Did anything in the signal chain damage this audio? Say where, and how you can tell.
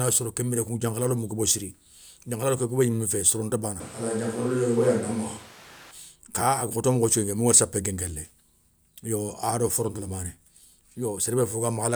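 Yes. From 3.80 to 5.91 s, just after "gnimé fé soronta bana", the speech turns suddenly roomy and thin: a switch to a distant microphone at capture, likely a dropped close-mic feed. The spectrogram shows weaker lows, reverberant smear and room noise about 25 dB below speech, between hard edges.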